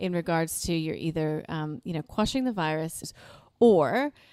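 A short speech clip with one audible discontinuity at 3.03 s, where the audio jumps abruptly forward with a tiny blip at the join. This is most likely a stream segment skipped: a piece of the segmented stream failed to arrive and playback resumed with the next one. Unlike a buffer dropout, which leaves a silent gap before the sound picks up where it stopped, the sound here continues without a pause but from later material, so part of the programme is lost.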